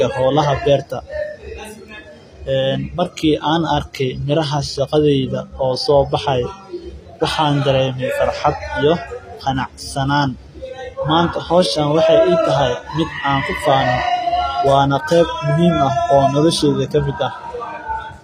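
Across the whole speech recording the treble sounds bright but false: s sounds come out gritty and lispy, with a metallic sheen, and nothing reaches above about 15.4 kHz. The likely cause is HE-AAC compression at a very low rate, consistent with roughly 24 kbps. The codec codes only the lower spectrum and rebuilds the upper bands by copying lower ones upward under a coarse envelope, so harmonics fail to line up across the crossover.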